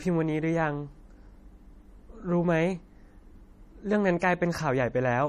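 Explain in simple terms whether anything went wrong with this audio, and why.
The audio was likely squeezed hard by MP3 compression, which saves space by discarding sound it judges unimportant. Here everything above about 14.3 kHz is gone, and faint detail flickers in and out across the whole clip, giving the speech a watery, swirly edge.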